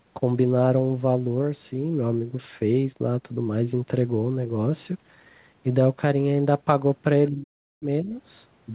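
Between 7.29 and 8.13 s the speech drops by about 40 dB, likely speech suppressed in double talk by the echo canceller, leaving a near-flat waveform and faint spectrogram.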